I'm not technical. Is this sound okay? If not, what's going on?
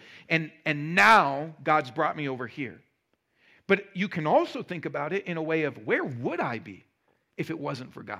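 Yes, the recording sounds fine, with no problems to hear.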